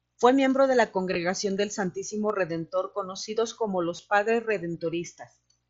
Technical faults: concealed Bluetooth headset packet loss

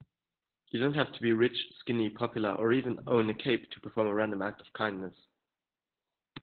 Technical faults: Opus voice compression

